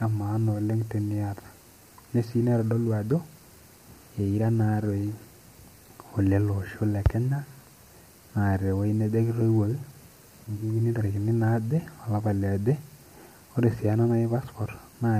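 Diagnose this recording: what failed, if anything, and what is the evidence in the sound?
Across the whole recording the speech sounds rough and grainy, with a hiss-like fill between the harmonics of the voice and a top band that sounds thin and synthetic, cut off with nothing above about 15.6 kHz. The stage is the codec, most likely low-delay AAC compression (AAC-ELD). Its short frames resolve pitch harmonics poorly and spend bits inefficiently, and the plainly audible damage fits a low bitrate of around 32 kbps.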